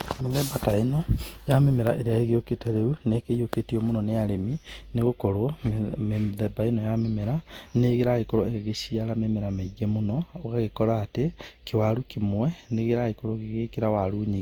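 From start to finish the speech carries a swirly, hollow smear, and consonant attacks blur, pointing to generation loss, likely from roughly seven successive Opus passes near 64 kbit/s. A single encode at that rate would not sound this degraded, though the band still reaches about 20.2 kHz.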